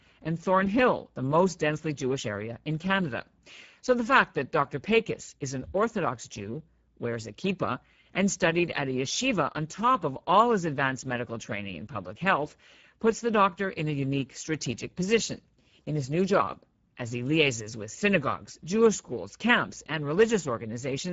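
Speex codec damage runs throughout the speech. This CELP coder spends too few bits on the excitation, leaving the speech plainly noisy and hoarse. The low rate points to a setting near 10 kbps, and nothing sounds above 7.7 kHz.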